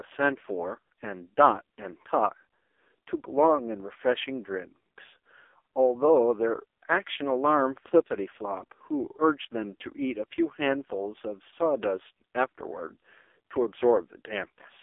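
Speech runs through the AMR narrowband mobile codec for the whole clip. The band sits between roughly 300 Hz and 3.5 kHz with nothing above 3.6 kHz, and the heavy buzzy, synthetic texture fits AMR-NB's lowest modes, around 5.15 kbps. Plain telephone band-limiting would muffle the voice but leave it natural. This sounds artificial because the codec rebuilds the voice from a vocal-tract model and sparse pulses instead of sending the waveform.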